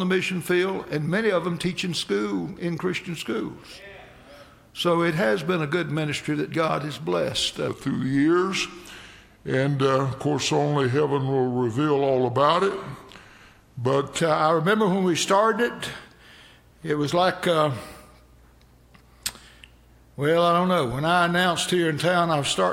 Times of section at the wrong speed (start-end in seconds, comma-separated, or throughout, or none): 7.68-14.19